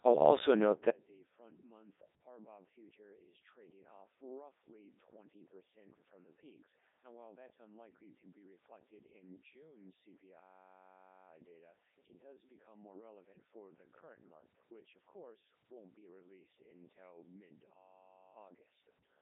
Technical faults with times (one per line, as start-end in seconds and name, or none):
0.00-19.22 Codec 2 vocoder
0.90-19.22 one channel inverted
17.74-18.35 system hang loop